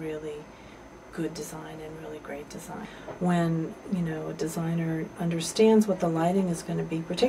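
No technical faults can be heard anywhere in the audio.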